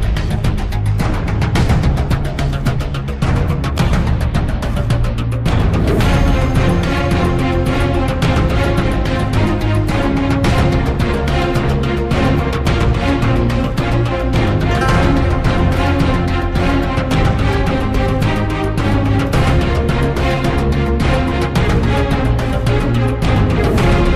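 No technical faults are audible.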